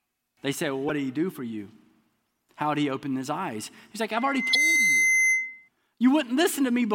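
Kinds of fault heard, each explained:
Damaged data in a compressed stream: corrupted bytes made the decoder misread frames and hunt for the next valid header, producing brief blips at 0.88 to 0.91 s, just before "did he do for", and at 4.50 to 4.55 s, inside the squeal.
Loudspeaker feedback squeal: the microphone picked up its own loudspeaker, and loop gain above one at 2.1 kHz let that tone grow by itself. It swells over roughly half a second from 4.12 s and holds about 5 dB above the speech until 5.69 s.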